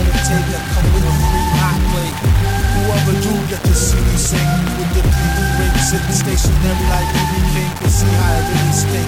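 From the first moment to the end, a grainy, gritty distortion rides along with the sound and shifts as it changes. Quiet passages get rough, and the softest bits either vanish or sputter between two levels. That's the classic signature of low bit depth without dither, likely around 4 bits with plain rounding, leaving the error only about 15 dB down and locked to the signal rather than spread out as a smooth hiss.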